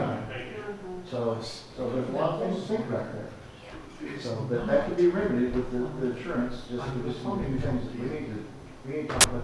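At 9.21 to 9.24 s a short burst of very loud white noise cuts in and stops abruptly: file tags played as audio. An embedded cover picture, stored as compressed data, has been read as if it were samples. Because compressed bytes are close to random, the result is very loud broadband static. On a waveform it appears as a solid, loud block with vertical edges. On a spectrogram it is an evenly bright band across all frequencies, lasting about 33 ms.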